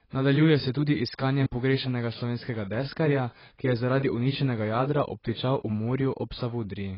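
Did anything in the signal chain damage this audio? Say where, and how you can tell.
Yes. Throughout, the speech sounds dull and smeared with fizzy sibilants and nothing above 5.5 kHz, likely AAC compression at the codec stage, consistent with heavily quantised AAC-LC around 16 kbps.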